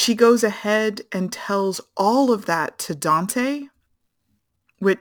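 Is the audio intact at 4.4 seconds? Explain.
No. At 4.4 seconds, as throughout the speech, a gritty, inharmonic fizz rides on the louder and brighter sounds, sitting roughly 25 dB below the signal. This is crude rate conversion: samples were repeated rather than filtered and interpolated, which fits a 44.1 kHz to 48 kHz change. Because the repeats fall in a fixed pattern set by that ratio, they create shifted, inharmonic copies of the speech.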